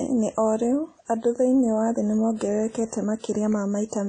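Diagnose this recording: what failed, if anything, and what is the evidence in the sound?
The failure is at the codec stage, and it runs through the whole speech clip. Nothing remains above 9.8 kHz, and the sound has a ringing, washy quality with hiss that swells and fades with the signal. Both point to WMA compression, likely a WMA 1 encode at a low rate that fits about 32 kbps. Long transform blocks smear quantisation noise over tens of milliseconds, and the encoder drops weak spectral lines, which leaves the damage plainly audible.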